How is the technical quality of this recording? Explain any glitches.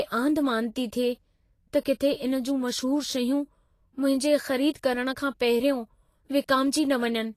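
The technical quality is limited by codec damage across the whole recording. Vorbis compression, likely at a low bitrate near 33 kbps, runs throughout. Nothing sounds above 14.2 kHz. The encoder quantised the treble coarsely, so fine detail turns into noise. The speech sounds hissy and grainy, with roughened tones and softened consonant attacks.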